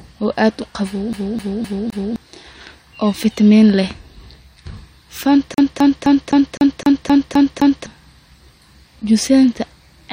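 Speech clip with two separate bouts of a CD stuck on one turn. The first starts at 1.13 s, right after "oo aad uqawow", and runs to 2.16 s. The second, longer one runs from 5.54 s to 7.86 s. Both loop a 0.26 s slice, four times in the first and nine in the second, with a short drop at each jump. A scratch knocks the laser back a track on every revolution, which gives that quick, even stutter.

Later, at 8.86 s, there's a tiny skip from overlap between stream segments. Two segments' timestamps claimed the same moment, so the player trimmed about 6 ms of audio that wasn't actually duplicated, and the waveform jumps across the gap. The stream's segments are 6 seconds long.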